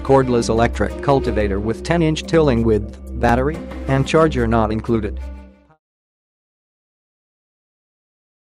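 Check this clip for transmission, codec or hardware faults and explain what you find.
No transmission, codec or hardware faults can be heard in this clip. The level fades out smoothly from around 5 s to 5.8 s, with no click or hard edge, just as an editor would shape an ending.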